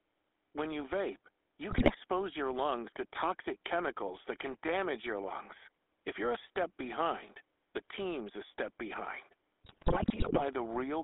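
GSM full-rate codec coloring runs from start to finish. The speech passes through a band of about 250 Hz to 3.6 kHz, and the codec rebuilds it from a vocal-tract filter excited by sparse, regularly spaced pulses. This leaves a plainly audible buzzy, gravelly grain on every syllable, consistent with a 13 kbps full-rate stream. Faint room noise, about 45 dB below the speech, sits underneath.

GSM bit errors strike first from 1.70 to 1.92 s and again from 9.64 to 10.42 s. Corrupted bits reach the decoder, so the filter, pitch and gain values for some frames come out wrong. The spectrum is bent and the level jumps, and the speech breaks into squawks, pops and gargling. The second burst is longer and denser, damaging many consecutive frames, which points to an error rate of a few percent on a weak link.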